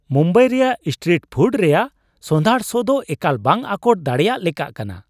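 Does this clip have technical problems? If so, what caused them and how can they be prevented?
No, nothing in this speech clip stands out as a technical problem, so there's nothing here that needs preventing.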